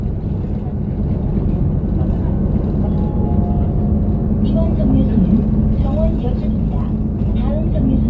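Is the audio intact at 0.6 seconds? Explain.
Yes, the sound at 0.6 s is intact, carried cleanly through the call path with its G.722 coding and nothing above 8 kHz.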